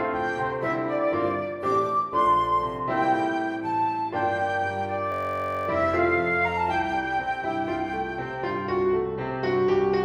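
A system hang loop at 5.12 to 5.68 s: the computer or driver stalled while the sound hardware kept replaying its ring buffer. A 21.33 ms slice repeats exactly, which fits a 1024-sample buffer, producing a steady buzz at 46.9 Hz before the audio resumes.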